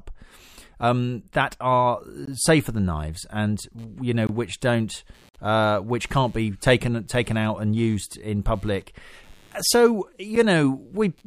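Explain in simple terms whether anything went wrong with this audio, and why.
Four times the speech briefly drops out into dead silence with hard edges: at 2.25 to 2.27 s, 4.27 to 4.29 s, 5.29 to 5.34 s (the longest, about 50 ms), and a very short one at 10.36 s. These are gaps between stream segments. The audio arrives in chunks of about one second, and when the timing of two chunks doesn't line up exactly, the player plugs the small hole with silence. Nothing is actually cut out of the speech. Extra silence is pushed in, so the sound stops for a moment and then picks up where it left off.

From 3.78 s to the end there is also a faint buzzing in the background, pulsing roughly a hundred times a second and staying well below the speech. This is computer activity noise. The computer's processor and other parts draw power in bursts, and that disturbs the electrical ground the audio circuit relies on. 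The buzz therefore follows what the machine is doing, not what is being said, which is why it runs independently underneath the speech.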